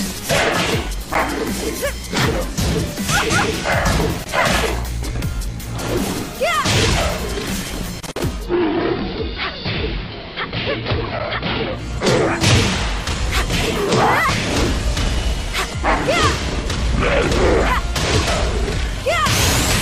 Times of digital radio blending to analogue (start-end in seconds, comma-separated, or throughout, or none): 8.26-11.99